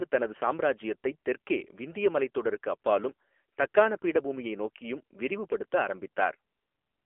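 A speech clip carrying the AMR narrowband mobile codec throughout. Nothing above 3.6 kHz survives, and the band sounds limited to roughly 300 Hz to 3.4 kHz. The coding damage is plainly audible: buzzy, synthetic texture, which fits a low mode near 8 kbps.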